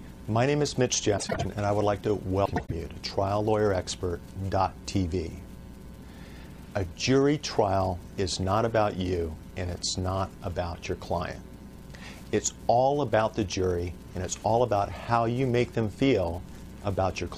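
Frames out of order at 1.17 to 1.46 s and 2.45 to 2.72 s: two adjacent blocks of about 100 ms played swapped, giving a garbled flutter.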